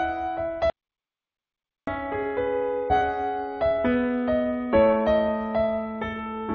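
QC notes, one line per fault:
0.70–1.87 s, audio dropout to silence: the sound cuts out for about 1.17 s of silence with no room tone, likely a lost input while recording continued.
2.90–3.02 s, skip ahead: playback jumps forward, dropping roughly a second of audio, as a jitter buffer discards the backlog and splices both sides almost directly.
3.63–6.41 s, jitter buffer speed-up: the sound runs hurried at 113% speed with unchanged pitch, as pitch-period slices totalling roughly 0.4 s are cut to shrink delay.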